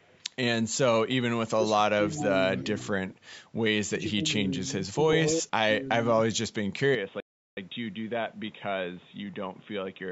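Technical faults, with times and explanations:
0.00–0.23 s, 2.12–2.24 s and 2.57–2.64 s, echo leak: delayed copies of speech trail the talker by about 390 ms at first, then about 421 ms, at roughly -35, -15 and -30 dB. The likely cause is a far-end loudspeaker echo the canceller missed. The fixed lag sets it apart from room reverberation.
1.45–2.06 s, 2.94–3.22 s, 4.06–4.25 s, 4.82–5.79 s and 6.14–6.40 s, speech suppressed in double talk: the talker's level dips in pieces, by about 15 to 40 dB, deepest in the long 4.82–5.79 s stretch. This likely happened because the canceller mistook overlapping speech for echo.
6.95 s to the end, input switched to a poorer device: the speech turns dull and boxy as the band narrows. The level drops about 5 dB and a new noise floor sits roughly 30 dB down, with no silence at the change. A likely switch to another microphone or a headset call profile fits this lasting shift, unlike brief suppression dips.
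7.20–7.57 s, playback stall: the sound stops dead for about 0.37 s, then resumes, likely because the player ran short of data. The clean, complete gap differs from double-talk suppression, which ducks the level rather than halting playback.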